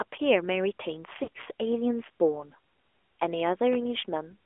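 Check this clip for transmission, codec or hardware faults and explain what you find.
Three faults are audible in this speech clip: narrowband mobile-codec coding throughout, a short dropout of lost speech frames, and a single loud pop near the end.

The AMR narrowband mobile codec colours the whole clip. The audio is confined to roughly 300 Hz to 3.4 kHz, and the voice has the plainly buzzy, synthetic edge of a vocal-tract model driven by sparse pulses, which points to a mid-range rate around 10.2 kbps. Unlike simple band-limiting, this fault adds that artificial texture.

Lost AMR speech frames appear from 1.24 to 1.28 s. For about 40 ms the decoder carries the last good pitch and spectral settings forward at falling gain. The result is a brief smeared warble and dip rather than a hard silent gap, which fits two missing 20 ms frames.

A loud pop lands at 3.73 to 3.77 s. It is a single sharp transient about 5 dB above the speech, and the voice continues intact underneath it. 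It is likely caused by a voltage step from a switch, plug or static discharge. Unlike frame loss, it adds energy instead of removing it.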